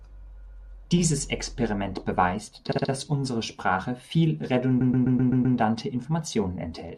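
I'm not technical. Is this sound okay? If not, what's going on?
No. This speech has repeated frames: small chunks of the compressed recording were sent more than once, so the player replays them. You hear a stutter, a 128 ms piece looping at 0.45–0.70 s and 4.80–5.57 s, and a 64 ms piece at 2.71–2.90 s.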